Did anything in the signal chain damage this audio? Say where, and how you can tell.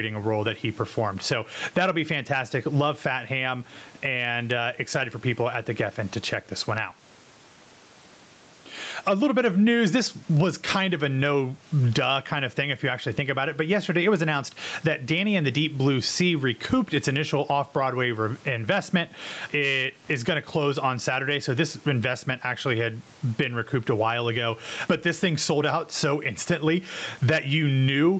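Yes. Gain pumping runs through the whole speech clip, at the capture and call-processing stage. The gain is pulled down on each loud syllable, swinging around 15 dB. Loud and soft passages sound squashed together. The likely cause is overdriven input gain with a fast limiter clamping it.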